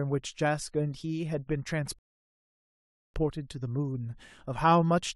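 At 1.99 s the speech stops dead and silence holds until 3.14 s. This is a rebuffering stall. The player used up the audio it had downloaded and had to wait for more. Nothing is cut from the speech. When playback returns, it picks up at exactly the point where it broke off. The gap simply inserts about 1.16 s of dead air, so the clip runs longer than the speech itself.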